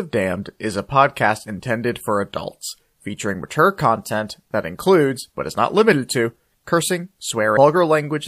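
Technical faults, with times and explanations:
7.53–7.57 s, damaged data in a compressed stream: right after "not limited to cursing", corrupted bytes make the decoder lose frame sync, giving a brief glitch while it hunts for the next valid header.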